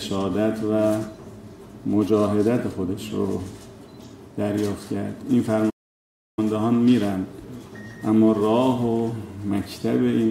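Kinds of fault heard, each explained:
Playback stall: The sound stops abruptly in mid-flow at 5.69 s and the output stays silent until 6.39 s. The gap lasts about 0.68 s, long enough to be heard clearly as a hole. It is not a fade or a dropout of a few samples. The player likely ran short of data, or its thread was held up, so nothing reached the output. When it recovers, the audio carries on again.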